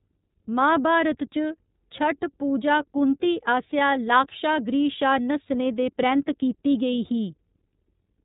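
From start to finish the speech sounds boxed-in and faintly synthetic, with a rough edge and no sparkle at all, since nothing above about 3.8 kHz survives. This is the iLBC codec at work, and its damage is plainly audible. It squeezes audio into a narrow telephone band and rebuilds each 30 ms frame's excitation independently of the previous one, which fits the 13.33 kbps mode and explains the grainy texture.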